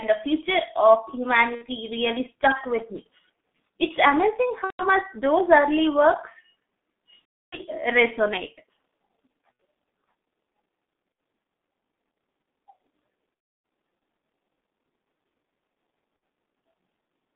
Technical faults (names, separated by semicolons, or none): G.723.1 codec; VoIP packet loss concealed by the speech codec